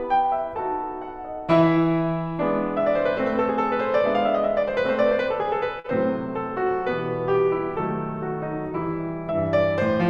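At 5.79–5.86 s, a short stall from a late packet: the jitter buffer ran dry, so the music hangs 48 ms, then resumes with nothing skipped, unlike packet loss.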